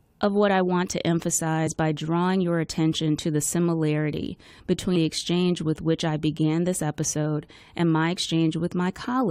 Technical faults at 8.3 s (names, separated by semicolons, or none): none